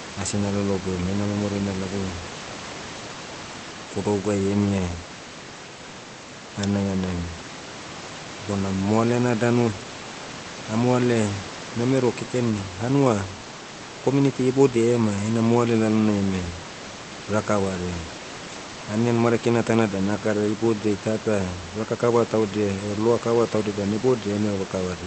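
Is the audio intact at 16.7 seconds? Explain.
Yes, the audio is intact at 16.7 seconds, with only the room's own background noise sitting about 15 dB below the speech, which is part of the recording rather than a fault.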